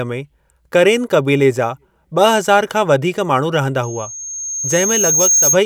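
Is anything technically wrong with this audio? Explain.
Yes. From 3.83 to 5.60 s there is loudspeaker feedback squeal: a 6.4 kHz tone from the speaker re-enters the microphone and swells over roughly a second and a half to a few dB above the speech. That gradual growth is what sets it apart from a steady interference whine.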